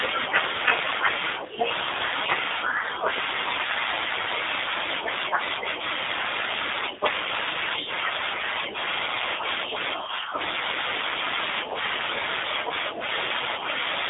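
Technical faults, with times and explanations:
Throughout, G.729 codec: The speech has been squeezed through a low-rate VoIP coder. The roughness fits a G.729A stream at about 8 kbit/s. Each short frame is rebuilt from a vocal tract filter, a pitch predictor and a few pulses, so voices sound rough and slightly synthetic. The line passes only about 300 Hz to 3.7 kHz, with nothing above 3.8 kHz. That leaves the sound thin and muffled, and the damage is plainly audible.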